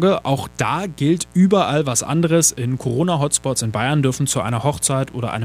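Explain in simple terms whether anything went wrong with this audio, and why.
Mains buzz runs through the whole clip: a steady, raspy hum under the speech, from electrical spikes tied to the 60 Hz power supply leaking into the recording.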